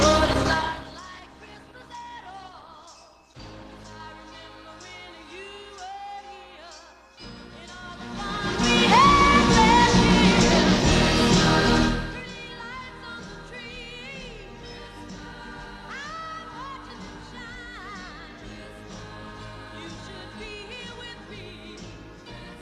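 From 0.0 to 4.0 s the audio is thin and dull. The treble is missing, and coarse codec artefacts smear the detail. The adaptive stream started at a low bitrate. The player picked a cheap version to begin quickly, before it had measured the connection. The sound fits Opus at about 16 kbit/s. At 4.0 s the quality jumps up with no gap, consistent with a step to around 64 kbit/s.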